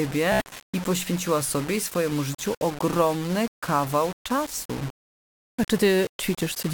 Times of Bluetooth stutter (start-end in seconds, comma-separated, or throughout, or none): 0.32-0.53